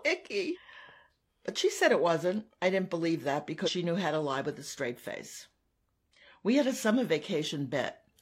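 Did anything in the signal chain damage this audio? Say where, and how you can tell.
Yes. I hear damaged data in a compressed stream, at the codec or storage stage. Brief glitches occur at 0.51–0.58 s, 3.63–3.69 s (after "I didn't believe that") and 6.13–6.19 s. Corrupt bytes garble frames. The decoder loses sync until the next frame header.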